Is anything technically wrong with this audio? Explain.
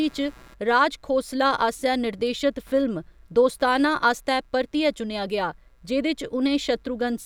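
Yes. Computer activity noise runs through the whole speech clip: a buzzy, chirping pulse train at roughly 150 Hz, sitting about 35 dB below the speech. Processor and graphics load shifts the shared ground, so unlike steady mains hum, it fluctuates with computer activity, not with the speech.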